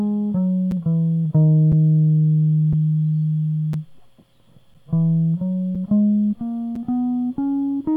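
Gaps between chunks at 0.71, 1.72, 2.73, 3.73, 4.74, 5.75 and 6.76 s break this music with 7 ms silences at each join of 1-second chunks.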